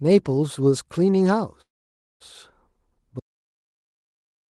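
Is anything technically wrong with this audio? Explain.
Yes, there are two faults in this speech clip.

From 1.61 to 2.22 s there is a call audio freeze. Packets were likely held up in transit, so the jitter buffer ran dry and the receiver stretched the last sound into a brief fading tail, then about 540 ms of silence. Speech resumes where it stopped, now running about 0.59 s late, with nothing lost.

From 3.20 s to the end there is an audio dropout to silence. The input was likely lost, through a disconnection, failed link or mute, while recording carried on writing silence. The speech cuts off abruptly into dead silence with no room tone, and never returns.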